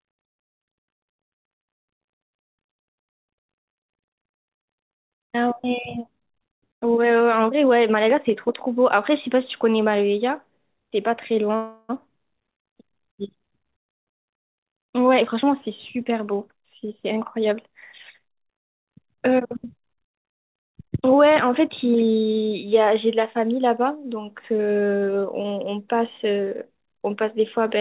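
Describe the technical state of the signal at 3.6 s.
At 3.6 s the speech is intact, with no dropout, click or distortion, only the normal narrowband sound of the G.711 call path, which carries nothing above 4 kHz.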